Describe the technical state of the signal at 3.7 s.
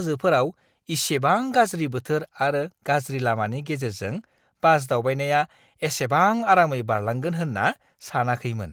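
At 3.7 s the speech is intact, with no dropout, click, distortion or other fault, and the Opus voice compression on the signal leaves only light coding traces at that moment.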